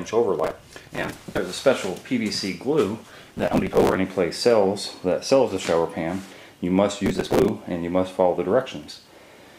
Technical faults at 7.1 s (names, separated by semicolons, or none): processor overload crackle